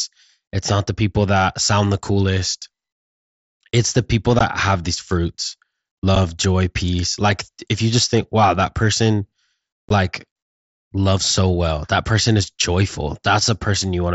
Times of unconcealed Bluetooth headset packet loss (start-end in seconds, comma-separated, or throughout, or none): 4.39, 6.15, 9.89